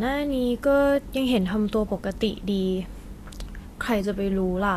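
Throughout the speech, the treble sounds hissy and grainy, and nothing reaches above 14.2 kHz. This is Vorbis compression, likely near 36 kbps. Coarse quantisation replaces fine treble detail with noise of similar energy, so the top sounds rough rather than merely dull, as simple low-pass filtering would.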